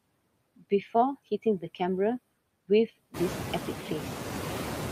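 Throughout the speech, the background drops away in pauses and returns under speech. These are noise suppressor artifacts from band-by-band cuts of about 16 dB, while the room noise rises by about 16 dB near 3 s.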